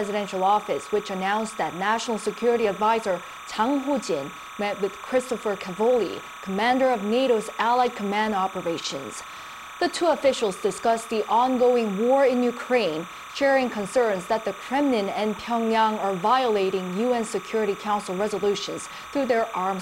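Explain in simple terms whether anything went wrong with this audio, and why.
A steady chirping warble runs behind the sound for the whole clip. This is timecode bleed: a sync signal from a nearby cable leaking in, flipping between tones near 1 and 2 kHz and repeating its code about 30 times a second. Unlike mains hum, it's high and flutters rather than droning.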